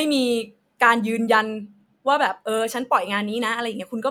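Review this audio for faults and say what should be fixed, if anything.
Nothing to fix: no faults are audible anywhere in the speech.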